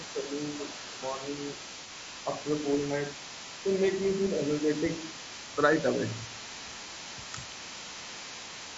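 From the very start the speech has a rough, grainy texture, with a hiss sitting between the harmonics and a top end that sounds thinned and a bit synthetic. That's low-delay AAC compression, likely AAC-ELD, the video-call codec. Its short frames don't resolve pitch harmonics well and eat bits, and the damage is plainly audible here. The graininess fits a low bitrate, something around 32 kbps.

Running underneath the whole thing, from 0.0 s right to the end, there's a second voice faintly coming through. It sits somewhere around 15 dB below the main talker. That's the other side's voice leaking through, likely because the talker's device played the far end on a loudspeaker and the echo canceller didn't fully scrub it out of the mic pickup.

Near the end, from 7.33 to 7.38 s, the talker's level briefly sags by roughly 5 dB, a quick dip of about 50 ms. That's speech suppressed in double talk. 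With both sides talking at once, the echo canceller likely couldn't tell its own talker apart from the loudspeaker echo, so it ducked everything for a moment.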